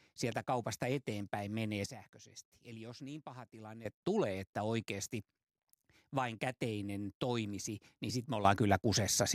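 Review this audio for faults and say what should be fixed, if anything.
Sudden gain jumps at 1.86 s and 8.45 s. At 1.86 s the speech and its background noise drop together by about 12 dB, recovering at 3.85 s. At 8.45 s both rise by about 10 dB and stay raised to the end. Each step lands between adjacent samples with no fade, likely from a gain setting or bit shift applied instantly. To prevent it, ramp every gain change over several milliseconds instead of switching it.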